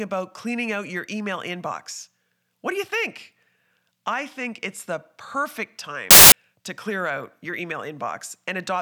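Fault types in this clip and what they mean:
samples built from the wrong bytes: the reader assembled each sample's bytes wrongly, letting the fast-changing low bits become the bulk of every value, so the speech turns to loud, harsh broadband noise for about 0.21 s at 6.11 s, between "think it's the perfect" and "to clear out your".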